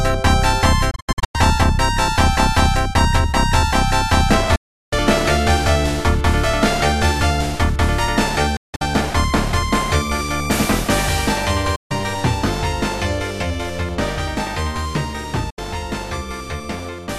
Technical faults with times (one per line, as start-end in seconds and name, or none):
0.91-1.35 digital broadcast dropout
4.55-4.93 digital broadcast dropout
8.56-8.82 digital broadcast dropout
11.75-11.91 digital broadcast dropout
15.50-15.59 digital broadcast dropout